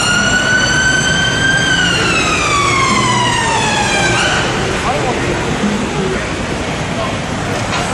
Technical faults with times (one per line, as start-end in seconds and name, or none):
3.56 damaged data in a compressed stream
7.35 damaged data in a compressed stream